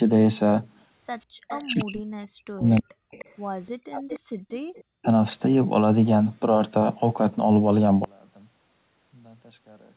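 From 1.2 to 1.85 s an echo leak appears: the far end's echo canceller has likely let loudspeaker sound back into its microphone, so a copy of the speech returns about 0.3 s late, about 15 dB below it. At 1.26 to 1.33 s the canceller gates the background, pulling the room sound down about 40 dB for roughly 70 ms. From 1.61 to 3.12 s speech is suppressed in double talk: with both sides talking, the canceller likely mistook the talker for echo, and the voice dips deeply and breaks up for about 1.5 s. The echo leak returns from 2.68 to 4.2 s, again 0.3 s behind and about 20 dB down. A shorter double-talk dip cuts into the speech from 3.76 to 4.06 s. Background gating recurs at 4.59 to 4.75 s, a drop of about 40 dB lasting roughly 150 ms, followed by a faint echo leak from 4.76 to 5.05 s, about 30 dB below the speech. From 8.04 s to the end, one channel inverted likely cancels the shared centre content on mono summing, and the speech collapses by about 31 dB into a faint residue.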